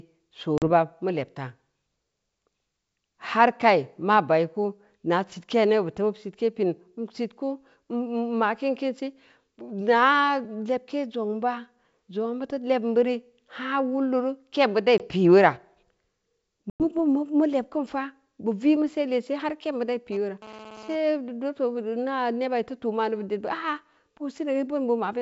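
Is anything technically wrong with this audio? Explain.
Yes, there are two kinds of fault in this speech, heard over wideband telephone coding that sounds consistent with G.722 at its full 64 kbit/s rate.

Packet loss on an ADPCM call occurs three times: 0.58 to 0.68 s with 40 ms missing, 14.98 to 15.09 s with 20 ms missing, and 16.70 to 16.83 s with 100 ms missing, roughly two, one and five packets' worth. Each gap is filled with silence. The receiving decoder's adaptive predictor and step size then no longer match the sender's, so after each hard-edged hole the speech resumes slightly distorted before settling.

GSM phone buzz runs from 20.12 to 20.96 s. A nearby 2G handset is transmitting in bursts at about 217 Hz, and the audio circuitry rectifies the radio pulses into the signal. The result is a hard, raspy 217 Hz buzz rich in harmonics, about 19 dB below the speech and unrelated to it. 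Because the phone is doing a data transfer rather than holding a call, the buzz comes and goes instead of staying steady.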